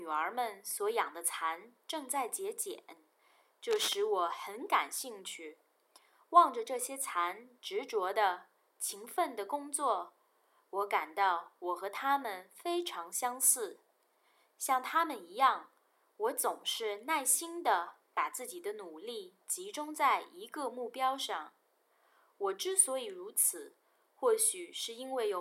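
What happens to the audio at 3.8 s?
A worn cable or connector likely moved, making its contact resistance flutter. The result is cable scratch noise from 3.70 to 3.95 s, uneven rustling bursts roughly 10 dB below the sound.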